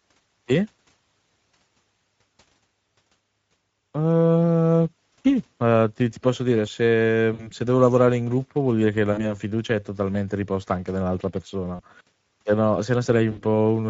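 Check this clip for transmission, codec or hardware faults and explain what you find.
Two faults are present: Speex codec coding damage across the whole speech clip, and four brief dropouts of VoIP packet loss concealed by the speech codec.

Speex codec, throughout. This CELP coder models each short stretch of speech as a filter driven by an excitation signal. With a limited bit budget for that excitation, the rebuilt voice comes out plainly grainy and hoarse, with a noisy, rough edge on every syllable. The coding runs at a rate around 16.8 kbps.

VoIP packet loss concealed by the speech codec, at 7.33 to 7.51 s, 9.13 to 9.19 s, 11.75 to 11.84 s and 13.31 to 13.44 s. Packets went missing, and the decoder filled each gap by repeating its last pitch and filter while fading the level. The first gap falls just after "ti posso dire se" and before "devo lavorare in gruppo". The second falls between "vuol dire che la" and "fiducia è totalmente riposta". 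The third comes just after "totalmente riposta anche nell'altra". The lost audio runs about 60, 40, 40 and 60 ms, which fits two or three 20 ms frames. Each gap is heard as a short buzzy or smeared sound that dies away, and the voice stays weakened briefly after each gap before recovering.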